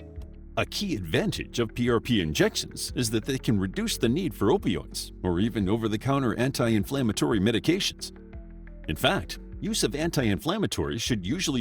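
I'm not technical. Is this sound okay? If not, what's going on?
Yes, the sound is fine, with nothing going wrong in the recording at any point.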